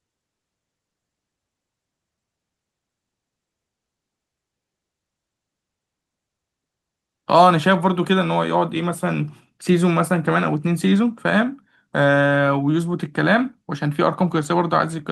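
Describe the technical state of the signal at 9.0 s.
At 9.0 s the speech signal is intact, carrying only the ordinary character of the WebRTC call path it passed through, with no dropout, glitch or distortion at that moment.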